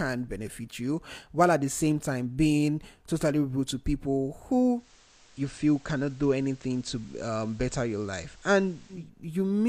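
At 4.70 s the speech takes on a steady hiss, roughly 30 dB below the signal, and shifts in level by about 1 dB, all over a smooth 212 ms transition. At 9.10 s it returns to clean sound. This is digital radio blending to analogue: the receiver lost the digital stream and cross-faded to the station's FM broadcast, then blended back once reception recovered.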